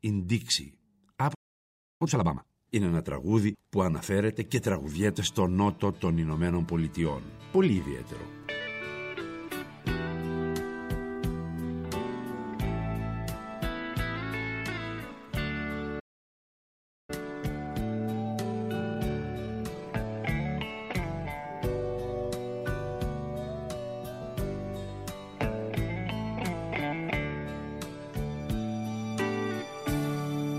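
At 1.34 s and 15.99 s the player likely ran short of data, causing a playback stall: silence for 0.66 s and 1.09 s. Time-compressed catch-up follows, cutting and cross-fading small slices of the backlog. The sound is hurried at unchanged pitch, at 2× from 2.02 to 2.68 s and 1.1× from 17.10 to 20.10 s.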